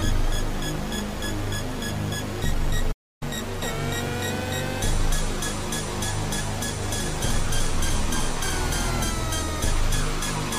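At 2.92 s the sound cuts out abruptly and stays silent for about 0.29 s, resuming at 3.23 s. This is a playback stall: the player likely ran short of data or its thread was blocked, leaving the output empty until it recovered.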